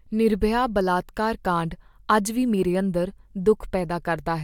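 Nothing technically wrong can be heard in this short speech recording; the signal carries no audible dropouts, distortion, noise or timing disturbances at any point.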